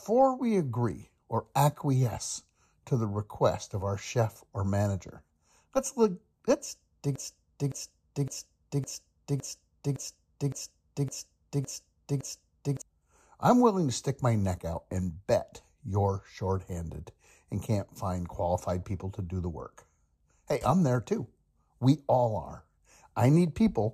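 From 7.16 to 12.82 s, right after "let's dig", a broken-record loop sets in: one 0.56 s fragment repeats exactly, ten times back to back, likely from a stalled player resending its last buffer. Unlike a stutter, the repeats are identical, and the speech before "I'm willing to stick" is lost.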